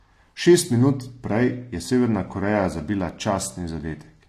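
Speech throughout, with plainly audible AAC compression damage: the sound is dull and smeared, with a warbling, fizzy texture on sibilants and sustained sounds. A spectrogram shows nothing above 14 kHz, likely from low-bitrate AAC-LC, around 32 kbps.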